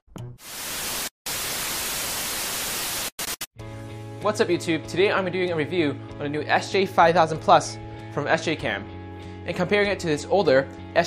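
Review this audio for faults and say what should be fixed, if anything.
Nothing in this audio needs to be fixed, as it has no faults.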